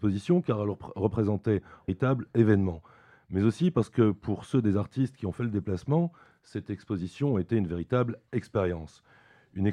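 At 1.88 s there is a brief glitch from damaged data in a compressed stream. Corrupted bytes leave the decoder unable to read the frames at that point, so it loses sync and searches for the next valid frame header, producing a short chirp, click or hole.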